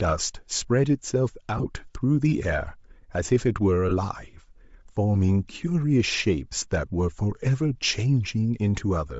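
From the start the speech carries a grainy, breathy edge, with the top end sounding hissy rather than detailed. That's plainly audible codec damage, most likely Bluetooth LC3 compression. At a low rate, which here sounds around 32 kbps, the encoder drops much of the upper spectrum and patches it with shaped noise, so consonants and the top of the voice get that sandy texture all the way through.

At 1.57 to 1.66 s there are lost LE Audio frames. About 45 ms of audio drops out in short gaps spread across roughly 75 ms, with the longest run only around 15 ms. The decoder fills each gap by replaying the last spectrum with scrambled phase, so the voice briefly smears into a noisy flutter. A second, shorter loss at 3.89 to 3.91 s, roughly 22 ms, gives a quick rough blip, and the gap sizes fit 7.5 ms frames.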